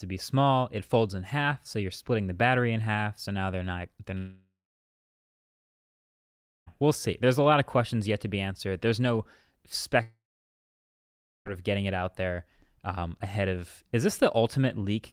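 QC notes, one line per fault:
4.17–6.68 s and 10.02–11.47 s, long network dropout: audio likely stopped arriving. After "now they're not they're" the last sound trails off as a fading buzz, then about 2.2 s of silence. Speech returns at "we'll see" with 2.5 s lost. The second gap drops 1.4 s, mostly silent, before "of getting it out".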